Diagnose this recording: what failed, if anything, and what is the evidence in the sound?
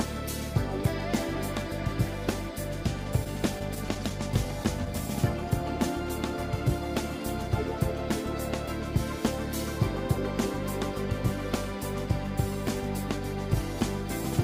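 The failure is in the network stage: scattered short gaps between 3.24 and 4.88 s, where a series of packets arrived late or not at all and the receiver concealed each hole by extending the preceding sound. Across that stretch there are around ten small patches, together only about a tenth of a second of filled audio, each brief, the longest roughly 15 ms. The sound stays clear but carries quick ticks, slight smears and hiccups.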